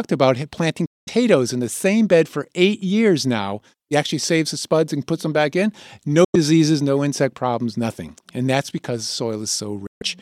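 Bluetooth dropouts at 0.86 to 1.09 s, 6.24 to 6.35 s and 9.87 to 10.02 s cut the speech to silence for roughly 0.23, 0.11 and 0.16 s, likely because audio packets reached the headphones too late and were discarded. Each gap has abrupt edges or a fade of a few milliseconds, and the speech resumes further on, as though it had kept playing through the hole.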